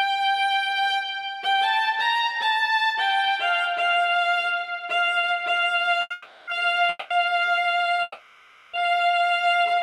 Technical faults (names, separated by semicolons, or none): short stall from a late packet; call audio freeze